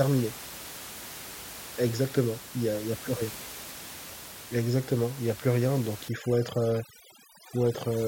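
At 6.09 s the speech changes character, and it stays that way to the end at 8.08 s. This is overdone noise removal. Up to then, room noise sits about 15 dB below the speech. From this point a noise reduction stage is set far too strong. It pushes individual frequency bands down or out whenever they come close to its noise estimate. The quiet parts of the speech are lost with them. The background drops and breaks up into twinkling specks.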